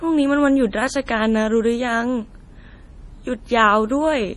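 Throughout the speech, the sound is watery and swirly, with a hollow, bubbling texture on sustained sounds, s sounds breaking into metallic chirps, and consonant attacks smeared rather than crisp. Nothing is present above 11.3 kHz, so the top end is cut flat. The damage is heavy and points to MP3 compression, likely at a low bitrate around 32 kbps. The encoder removed the treble and zeroed weak frequency lines, which flicker on and off between frames.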